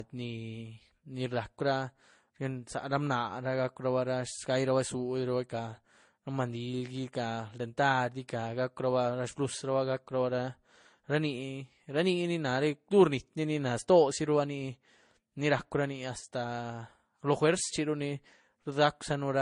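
Transcoding between lossy codecs runs throughout the speech: nothing above 10.6 kHz, with stacked, smeared artefacts, likely from low-bitrate MP3 re-encoded to Vorbis.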